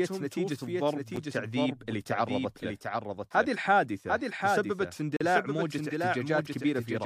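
Speech, with a doubled audio track running the whole way through. A second full-band copy trails the original by roughly 0.7 s, about 5 dB quieter. It has no decay and no room colour, so it sounds like a flat, late duplicate. The likely cause is a slower second capture path or two copies left out of step in an edit. There are also two gaps between stream segments. At 1.16 s a short hard-edged silence of about 9 ms cuts into the sound. From 5.17 to 5.21 s a longer one of about 39 ms follows. They sit four seconds apart, which fits four-second segments whose time stamps leave a hole that the player fills with silence. No audio is lost.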